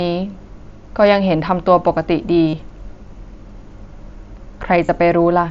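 Speech carried over a wideband mSBC headset link, with two bursts of concealed Bluetooth headset packet loss, at 2.48–2.53 s and 4.86–4.89 s. The first gap runs about 50 ms, which fits roughly seven lost frames. The receiver filled each gap by repeating the closest-matching recent stretch of waveform, giving a brief buzzy, level-held tone with a small warble at resumption. A waveform shows near-identical repeated cycles there, and a spectrogram shows frozen, evenly spaced harmonic stripes.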